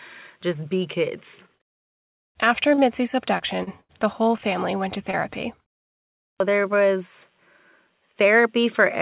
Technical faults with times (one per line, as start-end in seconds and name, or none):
1.56-1.75 short concealed packet loss
2.74-2.81 short concealed packet loss
3.38-3.91 repeated packet loss (robotic sound)
5.11-5.15 short concealed packet loss